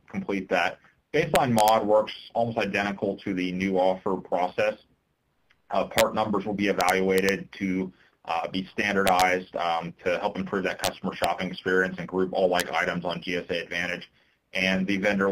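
Integer overflow cracks show up at 1.35 to 1.69 s, 5.98 to 6.01 s, 6.81 to 7.29 s, 9.07 to 9.22 s, 10.84 to 10.87 s, 11.24 s and 12.60 s. On those loud peaks the level goes only about 1 dB past the integer limit (about 2 dB at 10.84 s, and barely at all at 12.60 s). Instead of being held at the ceiling, the samples wrap to the opposite sign, so you get harsh, violent snaps that are far sharper than ordinary clipping.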